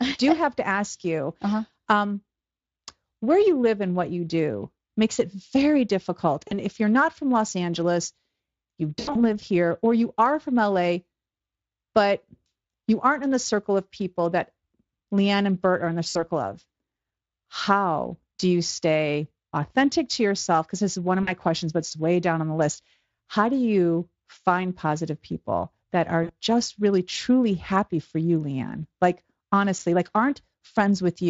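Right after "makes it very difficult" at 6.47 s, then around 8.99 to 9.2 s leading into "live here or you", after "are in the" at 16.09 s, and at 21.23 and 26.23 s, there's VoIP packet loss concealed by the speech codec. About 40 to 100 ms of audio is missing each time, and the decoder keeps extrapolating its last pitch and filter while fading the gain, so you hear a short smeared stretch, buzzy or noise-like, that sounds weak for a moment afterward. Underneath, the Speex codec sounds light, which fits a roughly 24 kbps setting.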